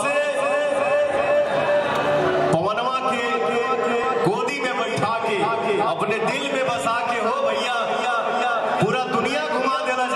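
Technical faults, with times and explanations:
1.17 s and 4.04 s, repeated buffer: each time, new audio arrived too late and the device played its last piece again, about 1.45 ms long, which fits a 64-sample buffer. The piece sounds twice with a hard join, heard as a brief click.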